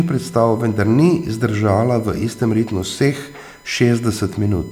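Under the speech from start to finish there's a steady USB whine, a fixed tone at 1 kHz sitting roughly 30 dB below the voice. The bus is drawing current in 1 ms frames, and that ripple is leaking into the audio through the power or ground.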